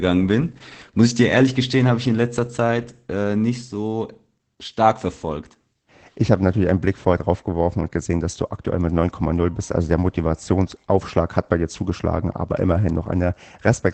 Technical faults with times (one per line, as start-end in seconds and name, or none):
0.00-13.94 Opus voice compression